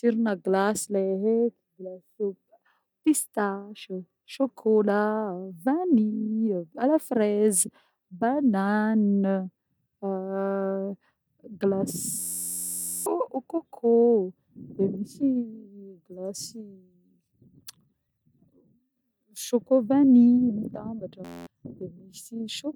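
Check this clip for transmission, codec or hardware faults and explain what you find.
The system briefly hung twice while the sound hardware kept replaying its ring buffer, a system hang loop. From 12.19 to 13.06 s and from 21.25 to 21.47 s, an 11.61 ms slice repeats, consistent with a 512-sample buffer. The result is a steady 86.1 Hz buzz, with roughly a second and then a fifth of a second of speech lost.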